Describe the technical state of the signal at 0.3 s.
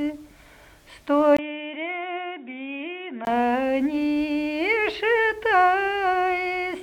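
At 0.3 s the signal is intact, with no audible dropout, distortion or other technical fault at that point.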